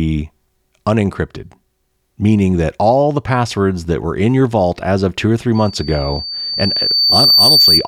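From 5.55 s to the end of the recording, a loudspeaker feedback squeal rises out of the speech. The microphone is picking up the loudspeaker it drives, and at about 4.6 kHz the loop gain exceeds one, so that tone feeds itself and swells over roughly two seconds into a piercing whistle that ends up a few decibels louder than the speech. A spectrogram shows a single bright horizontal line at 4.6 kHz, and the waveform's envelope steadily thickens.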